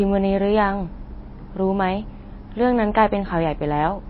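From start to finish the speech carries what is likely MP3 compression, and the damage is plainly audible. Nothing survives above 5.5 kHz, so s sounds lose their hiss, and the remaining band has a watery, swirling texture as weak frequency lines drop in and out between frames, which fits a very low bitrate around 24 kbps. That flickering is what separates it from a plain low-pass filter, which would dull the top without any swirl.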